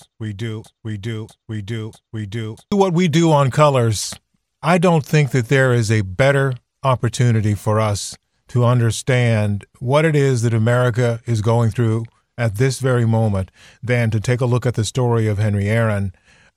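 From the first moment until 2.72 s the audio is caught in a broken-record loop, already running when the clip begins: a 0.64 s fragment of speech repeats exactly, back to back, three times before normal playback resumes with "what we do on". The likely cause is a stalled player or stream resending the last fragment it held, so the speech due in that span is lost. Unlike an echo or stutter, each repeat is identical and full-length, with no decay.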